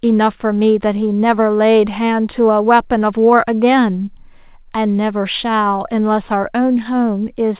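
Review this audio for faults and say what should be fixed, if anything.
No faults turned up in this audio, so nothing needs to be fixed.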